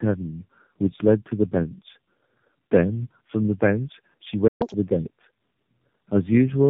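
From start to finish the speech carries tandem speech coding. It passed through three AMR-NB speech coders in a row, with G.711 mu-law links in between, and was decoded and re-encoded at each border. The chain points to AMR-NB at about 10.2 kbit/s followed by two passes at about 7.4 kbit/s. Each coder has to model the previous coder's errors, so the voice is rougher, more muffled and more warbly than a single narrowband pass would make it. Because the damage is steady across the whole clip rather than bursty, it sounds like compounded coding, not packet loss.

At 1.00 s a single loud pop sits on top of the speech, peaking about 10 dB above it. It lasts about 30 ms and ends by 1.03 s. It was likely caused by a voltage step or pulse from a plug, a switch, static or a driver glitch. The speech carries on unbroken underneath it. That separates it from a dropout or a splice, where the sound itself would be interrupted.

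At 4.47 s there is a playback stall. The output goes silent for about 123 ms, and the speech resumes at 4.62 s. The player likely ran out of data or had its thread blocked. The sound cuts off in mid-flow and is not overlaid by any noise. That distinguishes it from a pop, and its length distinguishes it from a brief click.

Straight after the stall, from 4.62 s to 4.74 s, comes catch-up at higher speed. The player works through its backlog at 2.0 times normal speed by resampling. Speed and pitch rise together, pitch by around ten semitones, and then return to normal. Because speed and pitch move in lockstep, this is resampling catch-up rather than a time-stretch, which would keep the pitch steady.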